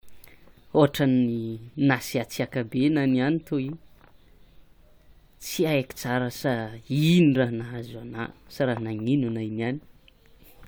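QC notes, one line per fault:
No faults were heard in the speech. Nothing here calls for a QC entry.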